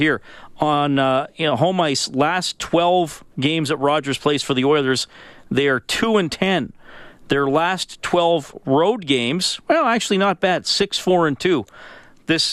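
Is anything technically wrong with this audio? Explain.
Yes. DAB burbling at 4.29 s, just before "for the", and from 10.57 to 10.82 s, after "games well actually not". Weak reception let bit errors, a fraction of a percent, slip past error correction and corrupt samples and scale factors, so single sub-bands pick up short noise blips or jump in level for up to a frame. The speech picks up short blips of noise.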